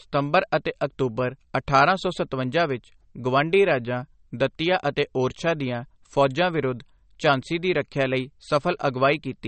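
From start to finish the speech has a hard ceiling at 8.4 kHz and a watery, swirly texture, with s sounds going metallic. That's likely MP3 compression, with a starved encoder (the damage fits a bitrate down around 35 kbps) chopping the treble and flickering weak frequency lines.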